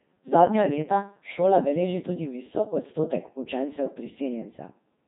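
Speech runs through a Codec 2 vocoder for the whole clip. The voice sounds robotic and buzzy, and heavily damaged. It is rebuilt from sine waves using only pitch, voicing, energy and envelope, so the original waveform is gone. Nothing remains above 3.8 kHz, which fits a rate around 2.4 kbit/s.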